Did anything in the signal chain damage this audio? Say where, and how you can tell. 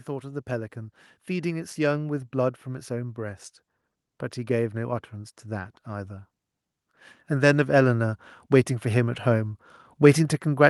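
Yes. Call processing: automatic gain rising from 0.05 to 3.44 s lifts level by about 6 dB. Voice and background noise swell together, slowly, which marks the gain control reacting to a quiet input rather than a louder talker. A louder talker would leave the noise floor unchanged.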